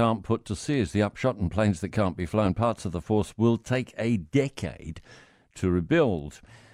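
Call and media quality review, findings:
No findings in this call and media quality review.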